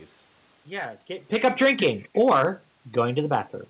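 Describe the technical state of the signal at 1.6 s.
Hard clipping is present at 1.6 s, as it is across the whole clip: the signal was driven about 7 dB past what the path could pass, so around one percent of samples, the highest peaks, are cut flat. Those squared-off tops add harmonics that do not belong to the speech, heard on the peaks.

Automatic gain falling is also under way at 1.6 s. It runs from 1.29 s to 2.37 s, as the automatic gain control, judging the input too loud or its background noise too strong, lowers its gain by about 6 dB in total. The level sinks steadily through that span, and the room noise drops with the speech, which sets it apart from the talker's own movement near 1.0 s, where the voice changes level at the microphone but the background does not follow.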